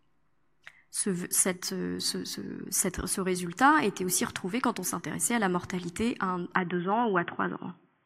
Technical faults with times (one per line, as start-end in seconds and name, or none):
6.56-8.05 input switched to a poorer device